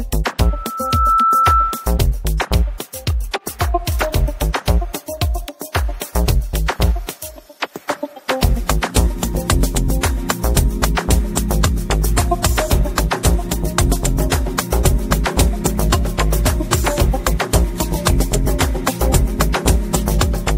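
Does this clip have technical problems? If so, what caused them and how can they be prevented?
Yes. A loudspeaker feedback squeal runs from 0.41 to 2.04 s: a single 1.3 kHz tone swells over well under a second until it sits roughly 5 dB above the rest of the sound. The microphone was picking up the loudspeaker it fed, and at 1.3 kHz the loop gain exceeded one, so that frequency kept reinforcing itself. On a spectrogram it appears as one bright horizontal line at 1.3 kHz that brightens from left to right. On the waveform it appears as a swelling, evenly repeating envelope. Reducing loop gain, moving the microphone away from or behind the loudspeaker, or notching 1.3 kHz would prevent it.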